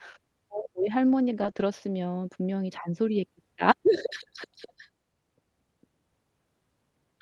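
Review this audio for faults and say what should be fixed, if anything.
Between 1.39 and 1.49 s, and again from 1.55 to 1.61 s, the speech turns briefly rougher and noisier without any gap. This is a lost packet rebuilt from error correction. The packets were lost, but the following packet in each case carried a low-bitrate Opus in-band FEC copy, and the decoder played that instead. The first repair covers 60 ms, which fits three 20 ms packets. The second covers 40 ms, consistent with two.

Between those repairs, from 1.51 to 1.55 s, there is a short concealed packet loss. About 20 ms of audio never arrived in time, and the receiver synthesised a 20 ms fill by extending the preceding sound before blending back into the real signal. The result is a brief smear or wobble inside an already degraded stretch. It is audible on top of the normal coding texture of the Opus call path, which is band-limited to 12 kHz.

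To prevent this, fix the network burst loss around 1.4 to 1.6 s, for example by improving the link or adding redundancy and jitter-buffer headroom, so these packets arrive intact.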